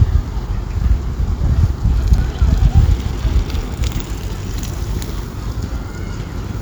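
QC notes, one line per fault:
2.18 s, underrun with held sample: the output buffer ran dry for about 5.8 ms, a 256-sample gap, and the converter held its last output value until data arrived again. The waveform flattens into a level line, so the sound drops out abruptly with little or no click at the start. Roughly five milliseconds of audio were skipped during the stall.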